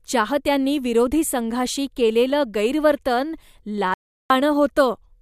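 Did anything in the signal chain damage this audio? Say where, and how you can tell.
Yes. An audio dropout to silence cuts the speech from 3.94 to 4.30 s, losing 363 ms. The waveform drops to flat silence and the spectrogram shows a blank column with no room tone. This is the likely result of a lost input link while recording continued.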